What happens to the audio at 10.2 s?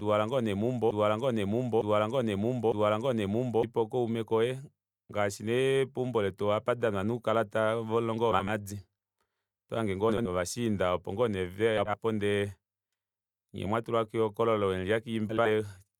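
A brief garbled flutter runs from 10.09 to 10.29 s: frames out of order, two neighbouring 80 ms blocks decoded swapped, with no time lost.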